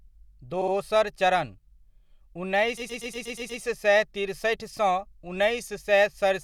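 Repeated frames stutter the speech at 0.61–0.73 s, where a 60 ms block plays twice more, and at 2.77–3.61 s, just before "सए तिरसठि सँ", where a 120 ms block loops seven extra times. Resent compressed frames lengthen the audio by 120 ms and 840 ms.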